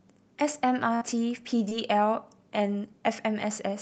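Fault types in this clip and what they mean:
Burst of packet loss: around 0.95 to 1.03 s, about 60 ms of speech drops out; the last sound is held and faded, then speech jumps ahead, unlike a brief smear.
Short concealed packet loss: at 1.69 to 1.73 s, a 20 ms hole is patched from the preceding sound, leaving a quick smear rather than a held, fading gap.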